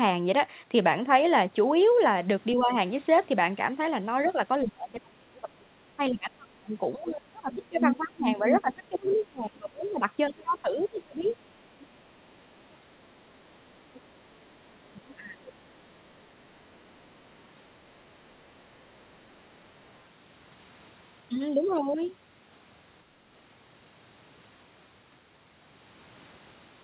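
From 2.54 to 2.71 s the talker dips slightly, by about 5 dB, then from 4.64 to 11.38 s it sinks by up to about 30 dB for roughly five seconds in total. This is speech suppressed in double talk, likely an echo canceller turning down the near talker while the far end speaks. The same ducking returns from 14.67 to 15.64 s, reaching about 25 dB.

The other side's voice leaking through is a second voice, likely loudspeaker echo that the canceller missed. It is strongest from 7.05 to 9.88 s, only about 5 dB below the talker, and fainter at 10.79–12.75 s (about 25 dB down), 13.94–17.42 s (about 30 dB down) and 19.84–20.0 s (about 40 dB down). Suppression turns the talker down, while echo leakage adds a separate voice on top.

Throughout the clip nothing sounds above 4 kHz, which points to a narrowband telephone codec.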